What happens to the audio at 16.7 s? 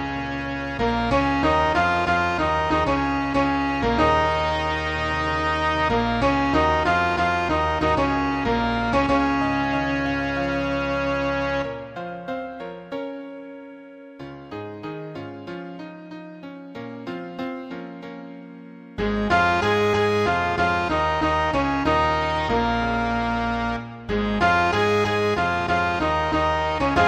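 Nothing goes wrong at 16.7 s; the audio passes through that moment intact, with no audible fault.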